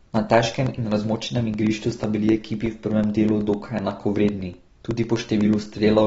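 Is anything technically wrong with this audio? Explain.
Yes, two faults. Throughout, the speech sounds dull and smeared, with nothing above 7.7 kHz. The likely cause is AAC compression at a low bitrate, around 24 kbps. On a spectrogram this shows as a flat ceiling and patchy holes.

From 0.17 to 5.91 s, periodic USB or driver dropouts replace about 2 ms with silence every 0.125 s, roughly fifty times. They are heard as regular ticks. On the waveform they look like evenly spaced gaps.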